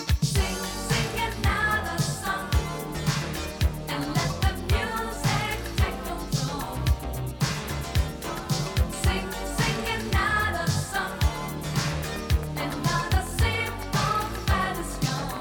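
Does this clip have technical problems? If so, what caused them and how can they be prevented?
Yes. A train of clicks runs from 11.74 s to 15.38 s: about thirty similar, evenly spaced pulses at roughly 7.2 per second, standing well above the audio. The likely cause is interference from nearby equipment or a faulty connection or power supply. Shielded cabling, distance from noisy devices and a stable interface prevent it.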